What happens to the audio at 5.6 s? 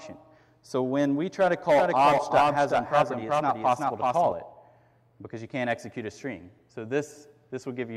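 Nothing goes wrong at 5.6 s: the audio plays through that moment intact, with no dropout, click, distortion or other fault.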